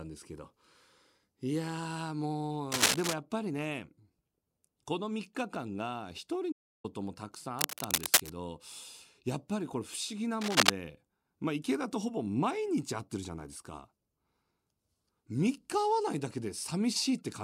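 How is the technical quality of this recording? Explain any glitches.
The recording has audible technical faults: three bursts of cable scratch noise and one audio dropout to silence interrupt the speech.

Cable scratch noise appears from 2.72 to 3.14 s, 7.59 to 8.31 s and 10.41 to 10.70 s. It is a rough, uneven scratching that sits above the speech, louder than the voice and loudest in the last burst. It is likely caused by a worn cable or connector being moved, which makes its contact resistance jump around. Unlike steady hiss or isolated clicks, it comes in dense, irregular bursts.

The audio dropout to silence runs from 6.52 to 6.84 s, about 0.32 s. The speech cuts off abruptly into silence with no room tone, then resumes mid-flow. That points to the input likely being lost while recording continued. A gate or fade would not cut to silence this abruptly.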